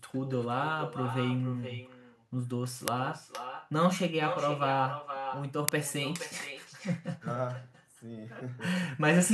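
Throughout the speech, every phrase returns about half a second later, roughly 10 dB quieter and thinner. This is echo with no canceller: the far end's loudspeaker feeds its microphone and the voice comes back across the network. The long, distinct delay marks it as echo rather than room reverberation.

At 2.88 s and again at 5.69 s, a very short, harsh crack cuts in. These are uninitialised buffers: blocks of about 0.67 ms and 1.33 ms, which fit 32- and 64-sample buffers, were played before audio was written, so leftover memory came out as samples. They are loud cracks rather than silent gaps.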